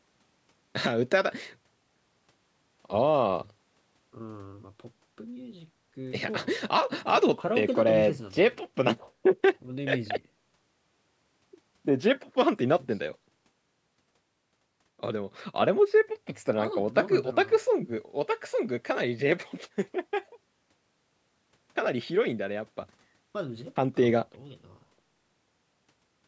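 Speech with no audible faults.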